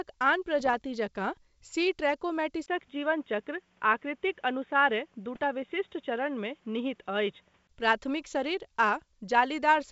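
From 0.60 to 0.75 s, just before "जकाँ सी", bit errors on an ADPCM link break into the speech. Each flipped bit throws off the decoder's step size and predictor, so the damage rings on briefly as pops and a rough, gritty burst. On the waveform it shows as spiky, uneven amplitude. On the spectrogram it appears as short vertical smears of broadband energy. The link itself sounds like G.722 at what points to 64 kbit/s.

At 2.66 s the sound abruptly turns dull and boxy after a gap of about 20 ms. This is most likely the input switched to a poorer device. Nothing passes above 3.8 kHz, so the spectrogram shows a hard ceiling where the wideband content stood before. A new noise floor sits about 40 dB under the speech, with no real change in level. The full band returns at 7.69 s, right before "प्राथमिक शरीर".

Inside that narrowed stretch, from 5.35 to 5.44 s, a second, shorter run of ADPCM bit errors adds another crackly pop with the same smeared look.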